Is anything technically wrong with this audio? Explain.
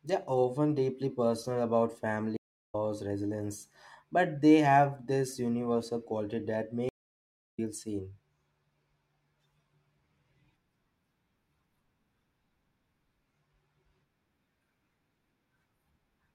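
Yes, there are two stream reconnects. At 2.37–2.75 s the speech goes silent for about 0.37 s, and at 6.89–7.59 s for about 0.69 s. Each time the connection dropped and the player restarted its decoder mid-stream. Unlike a simple dropout, the speech does not pick up where it stopped but resumes roughly 0.4 s later, skipping material.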